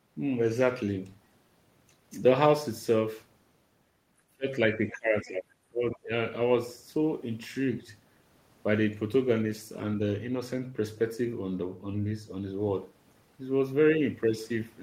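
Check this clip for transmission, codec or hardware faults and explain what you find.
The speech is being suppressed in double talk, in two places. The echo canceller likely could not tell the near talker apart from loudspeaker echo while both sides spoke, so it attenuated everything it picked up. From 4.32 to 4.48 s, and again from 4.75 to 6.11 s, the speech dips sharply, falling by up to about 30 dB for roughly a second in all.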